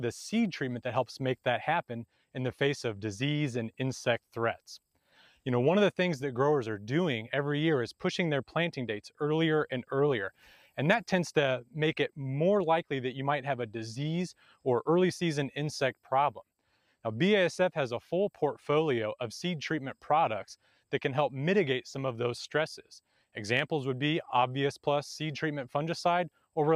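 At 4.95 to 5.38 s, 10.35 to 10.77 s, 14.37 to 14.65 s and 20.63 to 20.8 s, the noise suppressor misreads wanted sound as noise and pulls it down by about 10 to 12 dB, so each stretch briefly sinks and sustained tails are clipped short, losing a fraction of a second at a time. On a waveform the envelope dips abruptly; on a spectrogram the energy thins in patches while sharp onsets survive.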